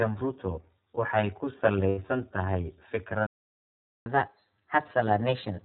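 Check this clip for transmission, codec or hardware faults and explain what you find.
Several faults are present in this speech, two running throughout and three at specific moments.

Channel delay (comb filtering) runs through the whole clip. One channel arrives roughly 10 ms after the other, and when the two are folded to mono, content common to both cancels at evenly spaced frequencies, the first near 50 Hz and then at regular steps above it. The result is a fixed hollow, phasey colouring that never moves, as though the speech were heard through a tube.

The iLBC codec also colours the entire clip, and its damage is plainly audible. Everything above 4 kHz is missing, so the speech sounds boxed-in and telephone-like, with a slightly rough, synthetic texture from the way each frame's excitation is rebuilt independently. The character fits iLBC in its 30 ms frame mode at about 13.33 kbps.

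Lost iLBC frames appear from 1.89 to 1.99 s, a gap of about 90 ms that fits three consecutive 30 ms frames going missing. The decoder filled the hole by repeating the last pitch cycle with some added noise, so instead of silence you hear a brief held, buzzy, vowel-like sound. Because each iLBC frame decodes on its own, the speech snaps back to normal immediately after.

A playback stall runs from 3.27 to 4.06 s. The audio halts mid-flow and goes silent for about 0.79 s before resuming. The likely cause is the player running dry of data or its output thread being blocked, so nothing was delivered to the output until it recovered. The break is abrupt at both ends and cuts the speech off rather than falling in a natural pause.

Catch-up at higher speed follows directly from 4.06 s to the end. To recover the time lost in the stall, the player resamples its backlog and plays it 1.1 times faster. 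Because resampling raises speed and pitch together, the speech sounds hurried and lifted by about a semitone and a half, giving it a slightly chipmunk-like tilt. The effect lasts through to the end of the clip, so it never drops back to normal speed.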